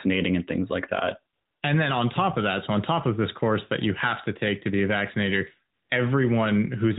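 Speech with two stretches of AMR comfort noise: after "and things like that", from 1.34 to 1.62 s, and after "to be a vaccinator", from 5.74 to 5.90 s. The sender stopped transmitting speech frames in each pause, and the receiver substituted smooth synthetic noise. Unlike a noise gate, it fills the gap with steady hiss rather than true silence.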